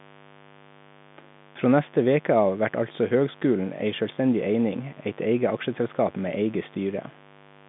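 Mains buzz runs through the whole speech clip, from start to finish: a raspy, steady hum-buzz about 25 dB below the speech, built on 50 Hz. Sharp switching spikes twice per mains cycle spread harmonics upward, heard here through a telephone band ending near 3.7 kHz.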